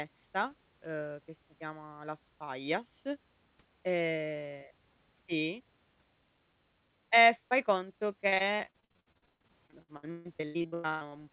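From 8.28 to 11.17 s, right after "fai conto", the speech suffers repeated packet loss (robotic sound). Packets keep going missing, and each hole is bridged by stretching the preceding sound, with gaps up to 144 ms. Nearly half that stretch is patched, leaving choppy speech with pieces missing.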